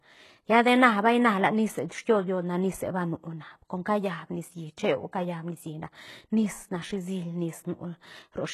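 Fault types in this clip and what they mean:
HE-AAC compression: The treble sounds bright but synthetic, sibilants turn gritty and metallic, and nothing remains above 12.3 kHz, likely from band replication at a bitrate around 16 kbps.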